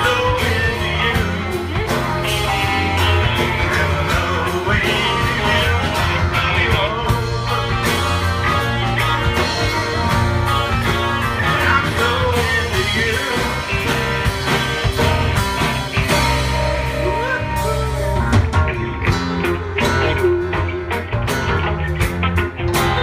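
No technical faults can be heard anywhere in the signal.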